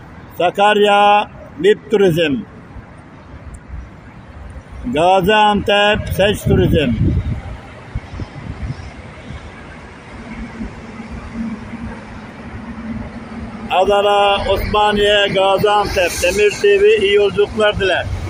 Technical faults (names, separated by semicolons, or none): none